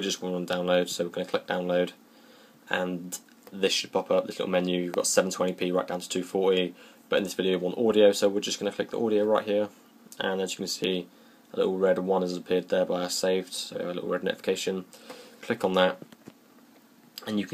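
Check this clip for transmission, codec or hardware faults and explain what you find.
Three brief electrical switching spikes are present, at 0.53 s, 4.94 s and 10.84 s. Each is a sharp snap laid over the sound, peaking around -20 dBFS for the first two and nearer -15 dBFS for the last. They are likely arcs from a nearby switch, motor or static discharge coupling into the audio line. They differ from codec or dropout clicks because nothing is removed or interrupted. The underlying sound continues straight through each snap.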